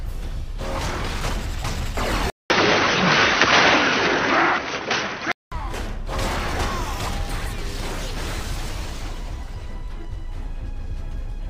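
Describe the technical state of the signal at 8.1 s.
At 8.1 s the signal is intact, with no audible technical fault at that point.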